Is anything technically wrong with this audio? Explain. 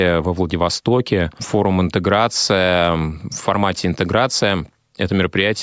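No, nothing technically wrong turns up anywhere in this speech recording, so there's really nothing here to flag.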